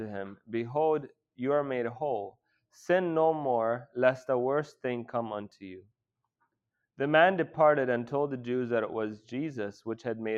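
Nothing stood out on listening to this audio.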